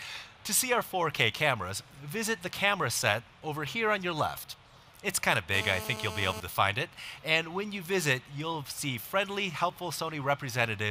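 From 5.54 to 6.40 s the audio carries GSM phone buzz, a hard, raspy tone at about 217 Hz, sitting roughly 10 dB below the signal. A 2G handset on a call nearby pulses its transmitter at that rate, and the audio circuitry rectifies the bursts into sound. The buzz stays nearly steady, as expected during a call. Mains hum sits at 50 or 60 Hz and sounds smoother; this buzz is higher, rich in harmonics and unrelated to the program.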